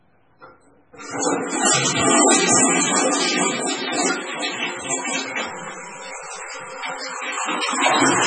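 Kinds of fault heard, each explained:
MP3 compression: Nothing survives above 10.2 kHz, and everything below is heavily damaged, with a watery, swirling texture and smeared attacks. This is the sound of an encoder that likely ran far short of bits, which fits a rate near 16 kbps. On a spectrogram the top is sliced off flat at 10.2 kHz. Beneath it, weak components flicker on and off in blocky patches from frame to frame, leaving holes throughout.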